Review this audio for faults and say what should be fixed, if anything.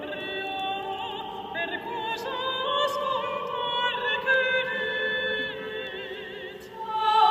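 Two sharp clicks occur, at 4.34 s and 5.87 s. Each shows as a thin vertical line across the spectrum. The likely cause is dropped samples. A couple of samples go missing, so the waveform jumps abruptly to a later value. No sound is lost beyond the click itself. To prevent this, give the recording and processing chain enough buffer headroom that it never skips samples under load.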